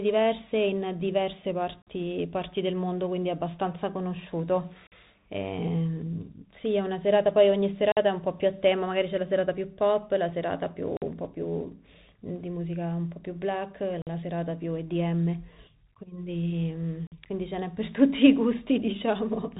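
From the start, the speech carries the sound of a Bluetooth CVSD headset codec. This coder sends one bit per sample, each bit nudging the waveform up or down by a step that adapts to the signal. Nothing gets through above 3.8 kHz, and the slope overload and step noise are plainly audible: s sounds turn scratchy, loud bright moments smear, and a granular hiss sits under the speech. On a spectrogram the energy stops flat at that ceiling across the whole clip. The grain points to a 64 kbps bit stream.

Over this runs a regular gap between chunks. The audio arrives in 3-second pieces, and a 50 ms stretch of silence is left at each join, at 1.82, 4.87, 7.92, 10.97, 14.02 and 17.07 s. The silence adds to the audio rather than replacing any of it, so the speech jumps forward intact after each hole. The holes are heard as abrupt dropouts with hard edges. On the waveform each one is a flat line with sheer walls. 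On a spectrogram each is a thin vertical blank strip. The strips repeat about every 3.05 seconds.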